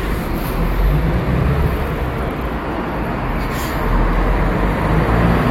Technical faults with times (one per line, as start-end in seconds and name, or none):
none